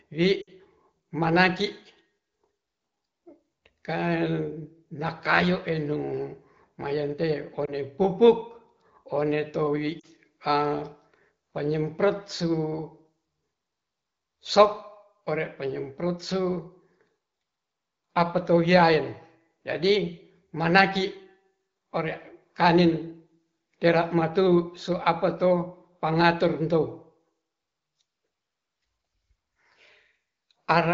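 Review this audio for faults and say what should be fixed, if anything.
Lost AMR speech frames at 0.41 to 0.50 s, 7.65 to 7.72 s, and 9.99 to 10.06 s (just after "one towi"). The gaps are about 60, 20 and 40 ms, which fits runs of three, one and two 20 ms frames. The decoder fills each one by repeating the last good pitch and vocal tract settings at falling gain. For the single lost frame this causes a brief warble or dip. In the 60 ms gap the speech drops to near silence within two frames, then the voice returns weak or rough for a moment. The wideband coding itself shows only light damage, consistent with a rate near 15.85 kbit/s. To prevent this, strengthen the radio link or its error protection so that fewer frames fail their checksum.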